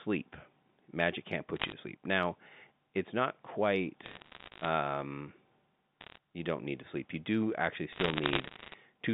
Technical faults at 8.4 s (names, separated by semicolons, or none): bit errors on a digital phone line